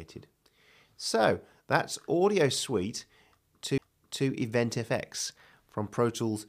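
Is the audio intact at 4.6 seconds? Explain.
Yes, the audio at 4.6 seconds is intact, with no audible dropout, glitch or distortion at that point.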